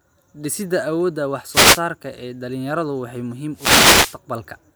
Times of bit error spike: none

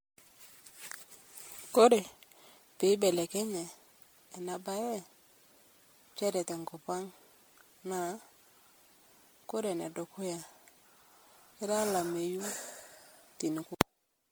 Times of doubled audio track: none

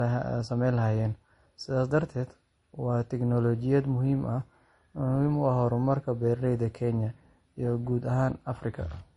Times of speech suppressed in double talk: none

